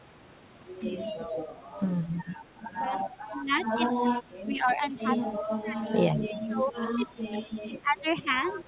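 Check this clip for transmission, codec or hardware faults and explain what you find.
Two kinds of fault are present: echo leak and speech suppressed in double talk. The speech is band-limited, with nothing above 4 kHz, which fits a G.711 mu-law call path at 64 kbps. A smooth fade-in runs from around 2.5 s to 3.53 s.

Echo leak appears at 1.32–1.37 s, 2.03–2.07 s, 2.98–3.04 s and 8.48–8.54 s. Faint delayed copies trail the speech by about 0.2 s. They sit roughly 15 to 30 dB below it. The likely cause is a loudspeaker echo canceller letting residual pickup through.

Speech suppressed in double talk occurs from 2.87 to 5.85 s, covering around 2 s in total. It returns from 6.41 s to the end. The speech dips by up to roughly 25 and then 30 dB. Both sides were likely talking at once, so the canceller ducked everything.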